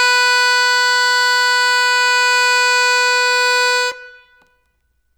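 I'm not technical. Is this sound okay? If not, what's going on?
Yes, this sound is okay, and nothing is going on that needs fixing.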